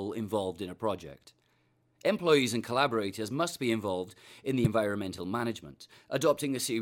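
At 4.65 to 4.67 s there is a brief burst of damaged data in a compressed stream: corrupted bytes leave the decoder misreading a frame and losing sync until it finds the next frame header, heard as a short glitch, a chirp, squawk, click or hole, lasting about 20 ms.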